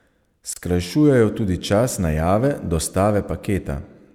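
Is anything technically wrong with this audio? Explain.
Yes. At 0.53 s the speech drops out abruptly for about 29 ms, ending at 0.56 s, then resumes exactly where it stopped. Both edges of the hole are smeared. This is a gap at a join of encoded pieces. The audio was encoded in separate 6-second segments and spliced without trimming, so the encoder's start-up delay and last-frame padding remain as silence at the seam. Only one such join falls within this clip.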